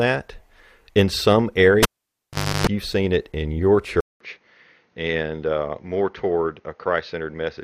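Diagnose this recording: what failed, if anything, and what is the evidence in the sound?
A live analogue connection was broken and remade, an input cable pulled and plugged in again. At 1.83 s a pop cuts the speech, and the signal drops to near silence for about 0.79 s. A 50 Hz mains buzz lasting about 0.32 s follows, as the plug tip touches before the ground sleeve seats and picks up hum. A second pop at 2.67 s brings the signal back. The fault sits in the analogue wiring, ahead of the converter.

At 4.00 s there is a 200 ms gap, and the speech returns on a different chain that lasts to the end of the recording. Nothing is left above 6.6 kHz, so the speech sounds duller and narrower. The level is about 5 dB lower. A new noise floor sits roughly 45 dB below the speech. Together these most likely point to the system switching its input, at the driver or device-selection stage, to a poorer device with a narrower band and its own noise.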